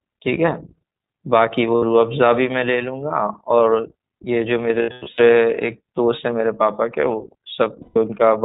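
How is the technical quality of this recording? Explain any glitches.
Quality is limited by narrowband coding, with three short dropouts. The iLBC codec removes everything above 4 kHz, leaving speech clear but slightly rough and synthetic. The damage is plainly audible and fits the 15.2 kbps mode with 20 ms frames. Lost iLBC frames occur at 1.76–1.83 s (60 ms), 7.82–7.98 s (140 ms) and 4.82–5.21 s, where 240 ms of losses are scattered over 360 ms and the longest gap is about a tenth of a second. At each loss the decoder repeats the last pitch cycle mixed with noise, producing a held, buzzy vowel. The voice returns almost immediately after each gap.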